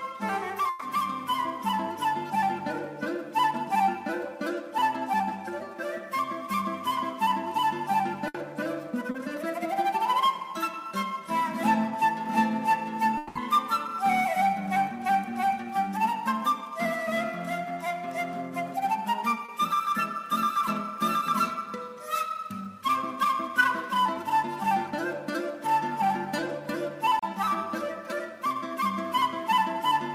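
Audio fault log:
0.69–0.82 s and 8.28–8.35 s, burst of packet loss: Several consecutive packets failed to arrive in time, 120 ms and then 60 ms of audio. The receiver extended the last sound and faded it, giving a held buzz or dying hiss before the audio resumes with that stretch missing.
9.11–9.15 s, 19.45–19.49 s and 27.19–27.23 s, short concealed packet loss: About 30 ms failed to reach the decoder each time. The receiver continued the preceding sound and blended back into the real signal, leaving a brief smear or wobble where a short detail may be lost.
13.17–13.36 s, long network dropout: The sound is continued as a fading buzz or hiss for about 180 ms, never dropping to silence, and then picks up further on with that span gone. This likely comes from the network delivering no packets for that stretch while the receiver concealed the gap.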